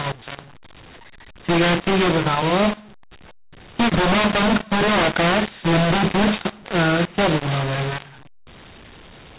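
From start to finish the speech carries a mu-law and A-law mix-up: telephone audio coded as A-law is being decoded as mu-law, so levels are scrambled into harsh distortion and pauses fill with hiss. Unlike clipping, quiet passages are damaged too, not just peaks.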